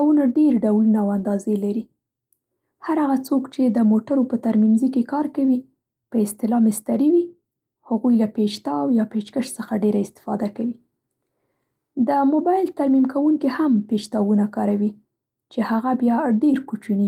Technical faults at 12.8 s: none

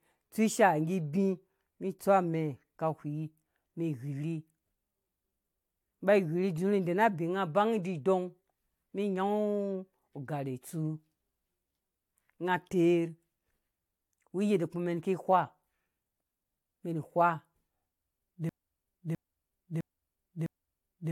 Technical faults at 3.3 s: generation loss

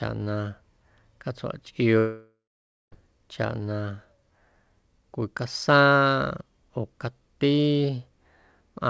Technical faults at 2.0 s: long network dropout

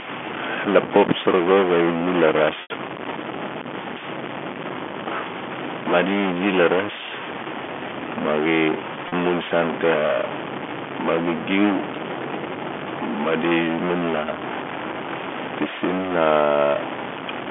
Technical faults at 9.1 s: stuck bit; packet loss with pitch repetition

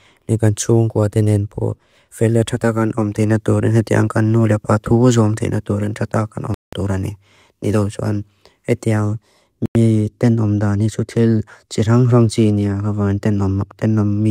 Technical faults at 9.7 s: Bluetooth stall

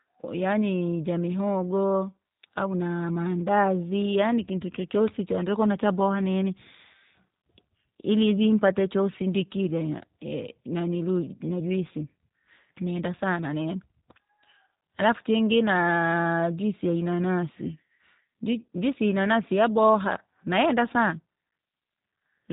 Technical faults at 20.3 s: G.729 codec

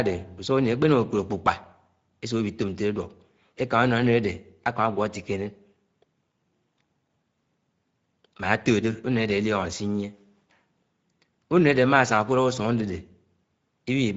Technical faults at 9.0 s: Speex codec

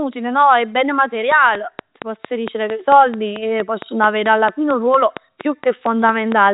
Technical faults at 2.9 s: train of clicks

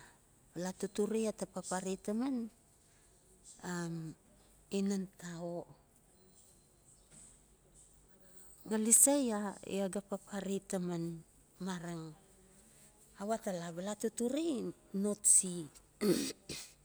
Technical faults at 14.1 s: none

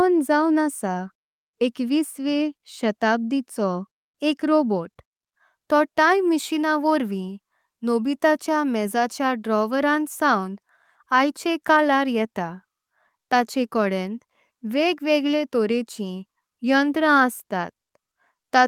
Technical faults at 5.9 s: none

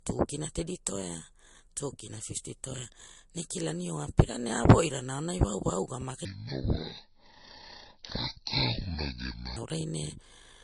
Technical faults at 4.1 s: transcoding between lossy codecs

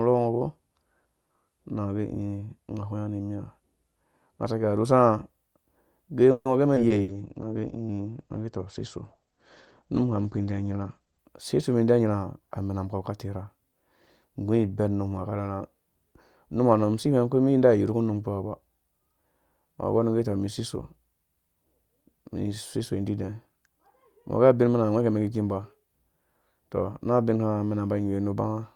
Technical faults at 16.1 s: none

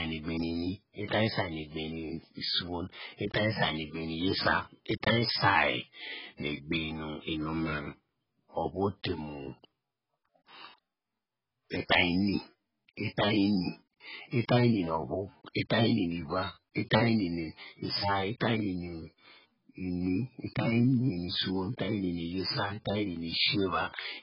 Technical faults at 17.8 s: AAC compression

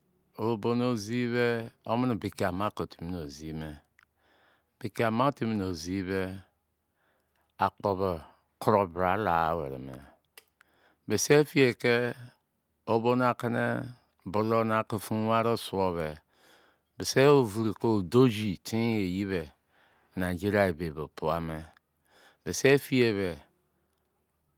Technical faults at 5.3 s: none

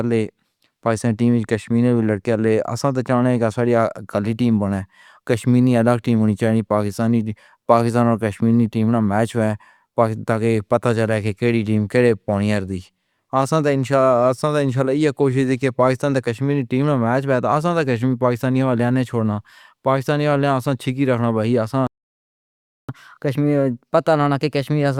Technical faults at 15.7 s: none

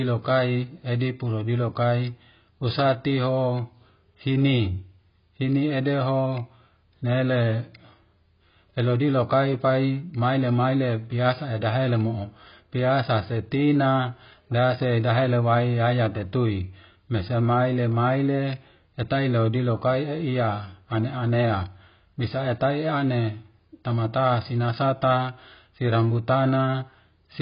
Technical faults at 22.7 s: AAC compression

